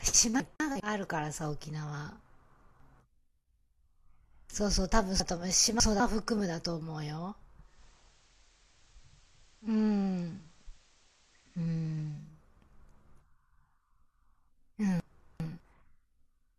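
It's a speech clip with two problems. There are chunks out of order at 0.4–0.8, 2.2–3.0, 5.2–6.0 and 15.0–15.6 s. A 200 ms block turns up one, three, three and two chunks late, so each spot sounds briefly jumbled. From 7.59 to 12.34 s there's digital radio blending to analogue. It cross-fades over about a quarter second to the FM signal, which brings in hiss around 30 dB down and drops the level about 1 dB, then fades back.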